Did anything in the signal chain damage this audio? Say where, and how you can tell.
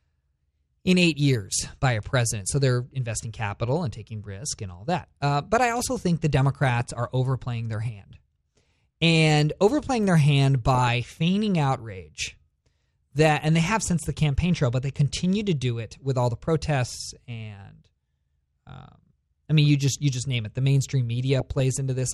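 Yes. Throughout the speech the top end is missing and the remaining sound has a gurgling, granular roughness. The cause is likely MP2 (MPEG Layer II) compression at the codec stage, at a rate that points to about 80 kbps. Bit starvation switches off whole upper sub-bands and coarsely quantises the rest. On a spectrogram the high frequencies end in a ragged ceiling, with blocky bands flickering on and off from frame to frame.

DAB burbling appears at 6.66–6.90 s, 10.75–10.88 s, 15.15–15.17 s and 21.40–21.60 s as short blips of noise over the speech. This is a reception fault: bit errors got past error correction into the MP2 stream, fitting an error rate of a few tenths of a percent. Corrupted scale factors make single sub-bands jump in level for up to a frame. On a spectrogram these show as isolated bright rectangular patches in narrow bands, and on the waveform as brief irregular bursts.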